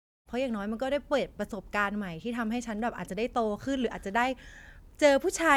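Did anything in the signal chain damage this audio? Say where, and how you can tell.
No, nothing in the chain damaged this speech clip; the level ramps in smoothly from the very top to full by 0.31 s, with no click or hard edge, as an editor's fade-in would.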